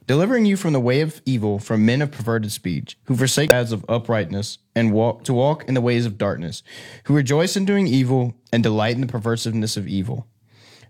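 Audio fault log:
3.48–3.53 s, damaged data in a compressed stream: right after "of perverted speech who" there's a brief glitch, about 50 ms, before "of uprightness and walk". Corrupted bytes made the decoder misread those frames and lose sync until it found the next frame header.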